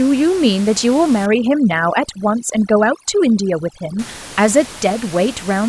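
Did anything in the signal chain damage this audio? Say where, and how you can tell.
Yes. Overdone noise removal runs from 1.26 to 3.99 s, and it belongs to the call-processing stage. Across that span the room noise, about 18 dB below the speech before and after, drops and breaks up into twinkling specks. The suppressor is set too aggressively: it pulls individual frequency bands down or off whenever they sit close to its noise estimate, and the quieter parts of the voice disappear with them.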